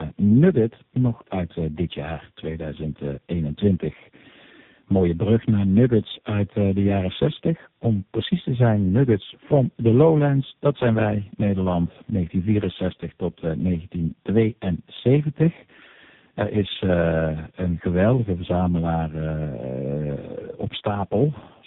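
Rough, muffled, warbly speech throughout, with nothing above 3.8 kHz, comes from tandem speech coding: three codecs in a row, each re-coding the last one's output.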